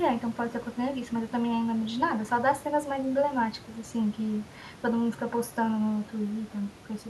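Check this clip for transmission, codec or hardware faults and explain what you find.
Nothing stood out on listening to the speech; the only background is the room noise, about 18 dB below it, which belongs to the recording rather than to the system.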